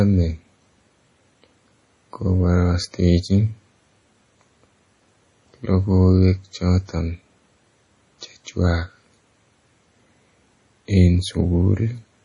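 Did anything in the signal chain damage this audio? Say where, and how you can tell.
Yes. The damage sits at the codec stage and runs through the whole speech clip: it is most likely MP3 compression at a low bitrate, around 32 kbps. Nothing survives above 10.5 kHz, so a spectrogram shows a hard, flat ceiling there, and below it the weaker bands flicker on and off frame by frame as the starved encoder discards them. That gives the heavy watery, swirling quality, metallic chirps on s sounds, and smeared onsets in the waveform.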